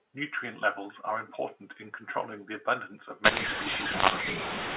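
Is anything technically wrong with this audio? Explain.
Yes. From about 3.24 s to the end, there's a mu-law and A-law mix-up. The mu-law G.711 telephone audio gets read back as A-law, so sample levels are mis-mapped. Speech turns harsh and gritty, and the gaps fill with hiss instead of near-silence.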